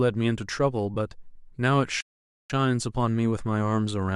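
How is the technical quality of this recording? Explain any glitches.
The speech has two glitches.

Lost LE Audio frames at 0.94–0.97 s: about 22.5 ms of Bluetooth audio went missing, consistent with three lost frames. The decoder patched the gap by replaying the last spectrum with scrambled signs, briefly smearing the speech into noise.

Playback stall from 2.01 to 2.50 s: the output goes silent for about 0.49 s mid-speech, likely because the player ran short of data or its thread was blocked, before sound resumes.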